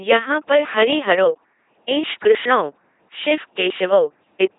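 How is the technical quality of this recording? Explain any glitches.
Quality is poor. The entire recording has gone through an LPC-10 vocoder. Throughout, each moment is rebuilt by a filter of up to ten poles fed either a pulse train or noise, never a mix. The speech comes out buzzy and robotic, with nothing above 3.8 kHz, which fits a 2.4 kbit/s stream.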